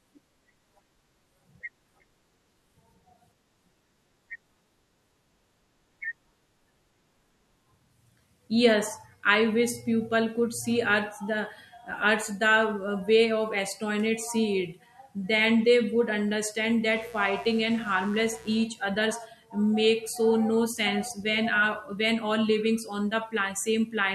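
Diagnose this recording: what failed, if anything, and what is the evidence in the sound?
Mains buzz got into the analogue wiring from 16.92 to 18.64 s, just before "others make so no". Spikes twice per 60 Hz cycle give a raspy buzz roughly 25 dB below the speech. A spectrogram shows evenly stacked 60 Hz harmonic lines reaching several kHz.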